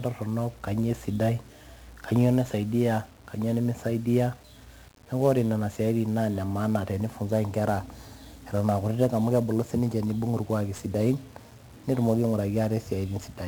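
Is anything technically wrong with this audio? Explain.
Yes. The speech is affected by 1-bit DFPWM compression for its whole length. DFPWM stores a single bit per sample, and each bit only nudges an adaptive level up or down to track the waveform. That coarse tracking leaves strong broadband quantisation noise across the whole recording, so the speech sounds fuzzy and crackly and its treble is buried under hiss. The heavy damage fits a 48 kbps DFPWM stream.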